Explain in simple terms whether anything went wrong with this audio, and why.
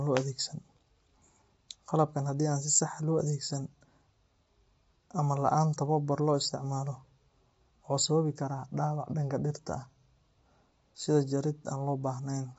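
Yes, something went wrong. The speech was most likely squeezed by low-delay AAC compression, the kind used in video calls, which works on very short slices of sound and has too little data to keep the detail. From start to end of the clip, the voice sounds rough and grainy, with a hiss-like fuzz between its tones, and the top end is missing: nothing is heard above about 7.8 kHz, so it sounds dull.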